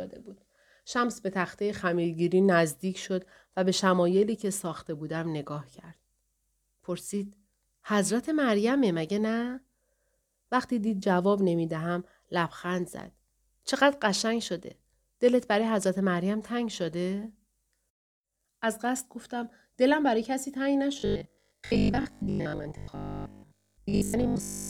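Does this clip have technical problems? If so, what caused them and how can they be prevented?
Yes. Robotic sound from repeated short buffers runs from 21.0 s to 24.7 s, turning the voice into a rigid, metallic buzz near 50 Hz that still loosely tracks the speech. The cause is likely audio arriving too seldom, so the playback side keeps looping its last chunk of about 20 ms, for roughly 70% of that stretch, while the missing audio is skipped. Preventing it means giving the stream a larger jitter buffer and enough network or processing headroom.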